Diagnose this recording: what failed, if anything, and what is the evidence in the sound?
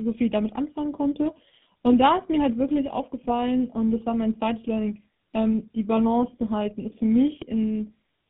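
Tandem speech coding, throughout the speech, at the codec stage: rough, muffled, warbly, nothing above 3.8 kHz, which fits AMR-NB re-encoded by GSM full rate, compounding artefacts.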